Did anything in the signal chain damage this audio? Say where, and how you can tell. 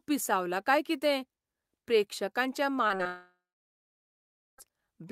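Yes. Short concealed packet loss in the network path: brief smears at 2.87, 2.97 and 3.03 s, each about 20 ms of extrapolated sound.

A long network dropout follows from 3.07 to 4.60 s, likely a lost stream. A fading buzz or hiss gives way to about 1.2 s of near-silence, and the speech resumes with material missing rather than delayed.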